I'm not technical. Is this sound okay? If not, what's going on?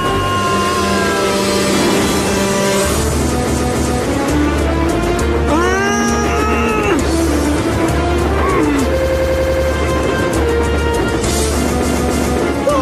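No. There are repeated frames: short chunks replay like a stutter, about a quarter second twice at 3.46–4.02 s and 11.82–12.38 s, and a tiny chunk seven times at 8.99–9.64 s.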